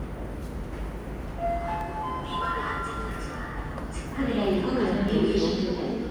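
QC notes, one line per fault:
1.81 s and 5.09 s, dropped buffer (overrun): at each point the audio lurches forward with no gap of silence, as if roughly 20 ms had been snipped out and the two edges butted together. The likely cause is the recording side failing to read its buffer before the hardware wrote over it, so that block never reached the file and the waveform steps abruptly from one edge to the other.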